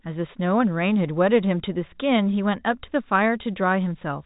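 No technical faults are present; the speech carries the narrow band of G.711 mu-law telephone coding at 64 kbps, with nothing above about 3.8 kHz.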